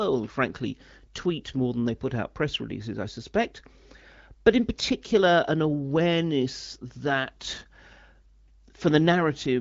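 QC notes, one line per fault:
No faults found in this speech clip. It carries the band-limited character of an AMR wideband (HD Voice) codec, with nothing above 7.6 kHz and only light coding damage, which fits one of the higher rates around 16 kbit/s.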